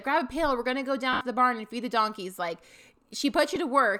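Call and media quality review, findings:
Lost LE Audio frames at 1.13–1.21 s and 3.55 s. LC3 concealment smears the speech into noise, then fades across the 80 ms gap. This fits roughly eight lost 10 ms frames.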